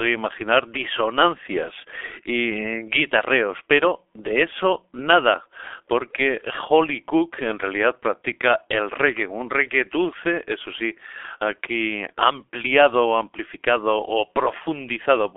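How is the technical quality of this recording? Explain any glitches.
The quality's pretty rough: the speech has been through a heavy G.723.1 codec for the whole clip. It's a narrowband phone codec working in 30 ms frames at a very low rate, likely around 6 kbit/s. The band sits roughly between 300 Hz and 3.5 kHz, with nothing above 3.7 kHz, and the voice model updates slowly. The result is muffled, hoarse speech with smeared consonants.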